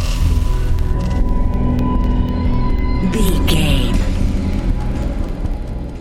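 From 0.29 s to 5.79 s there are periodic USB or driver dropouts. Something blocks the audio path every 0.25 s. A tiny sliver of sound, well under a millisecond, is replaced by silence each time. The result is a steady train of ticks, about twenty in all.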